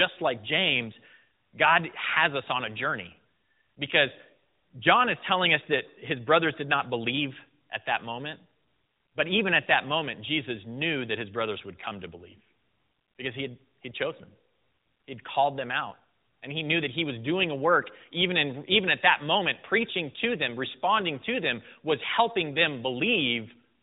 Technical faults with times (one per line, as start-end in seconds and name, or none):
none